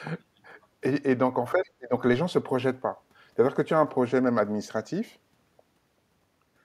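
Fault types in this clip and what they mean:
Speech suppressed in double talk: From 1.53 to 1.93 s the talker's voice sinks, at its deepest by around 20 dB, for roughly a third of a second in all. This is likely the echo canceller ducking everything while both sides spoke at once.
Other side's voice leaking through: Between 1.64 and 1.69 s a faint scrap of a second voice slips in, sitting around 30 dB under the talker. It's likely loudspeaker echo the canceller didn't fully strip from the microphone, right inside that dip.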